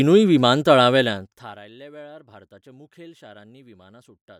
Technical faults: zipper noise

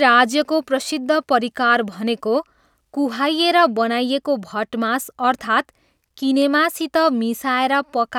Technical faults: none

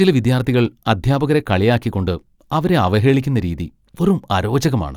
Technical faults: none

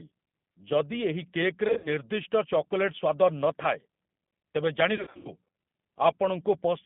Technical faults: G.729 codec; VoIP packet loss concealed by the speech codec

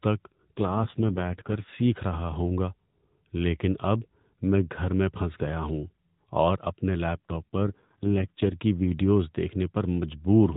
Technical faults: AMR rate drop

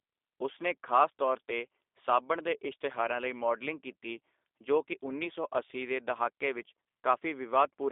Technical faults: G.729 codec

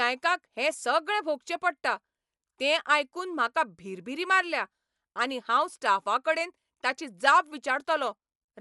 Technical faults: Dolby Digital compression

